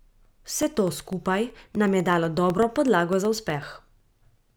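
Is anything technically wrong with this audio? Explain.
Yes: periodic USB or driver dropouts run from 0.13 to 4.50 s, with a millisecond gap of silence every 0.125 s. Their strict regular spacing, unlike random clicks, points to a blocked bus, ticking only during speech.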